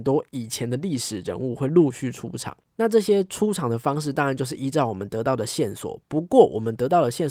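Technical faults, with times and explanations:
Nothing stood out as a technical fault on listening to the speech.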